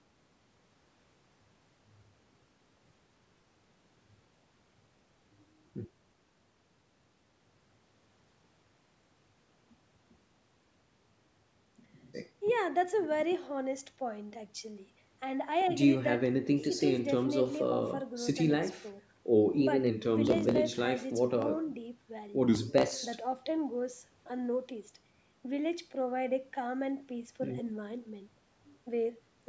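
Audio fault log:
No faults to log; the speech has passed through a call's microphone processing, which limits it to nothing above 8 kHz as normal.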